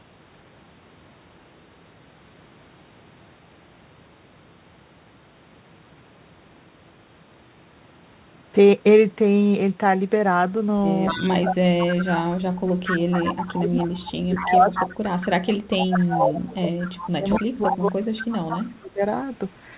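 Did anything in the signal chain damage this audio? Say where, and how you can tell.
Yes. Echo leak, likely from incomplete echo cancellation: a 230 ms delayed copy, about 5 to 10 dB down, at 11.05–12.18, 12.85–15.26, 15.97–16.14, 16.81–17.89 and 18.49–19.11 s, visible as smeared, offset repeats of the spectrogram patterns.

Speech suppressed in double talk, likely from the canceller ducking both sides: gain drops about 25 to 30 dB at 11.11–12.56 and 13.17–19.01 s, showing as waveform gaps within the 4 kHz-limited band.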